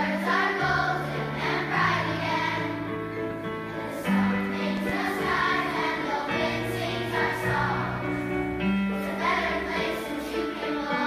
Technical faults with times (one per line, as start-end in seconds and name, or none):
4.77-4.92 loud pop